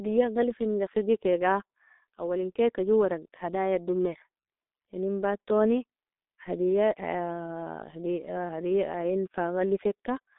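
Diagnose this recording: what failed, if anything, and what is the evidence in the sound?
Muffled, hoarse speech with smeared consonants runs from start to end, with nothing above 3.8 kHz and a narrow band of about 250 Hz to 3.7 kHz. This is heavy G.723.1 codec damage at the codec stage, fitting roughly 6 kbit/s with a slowly updated voice model.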